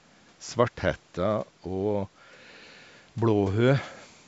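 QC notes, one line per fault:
No faults found; the speech carries the normal call microphone processing, with its high-pass filter trimming the lowest bass and nothing above 8 kHz.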